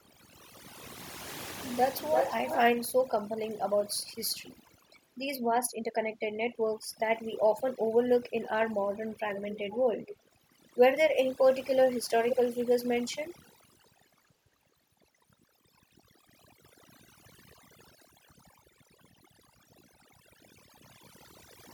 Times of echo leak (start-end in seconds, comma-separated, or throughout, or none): 1.98-2.61, 9.08-9.79, 10.06-10.17, 12.30-12.36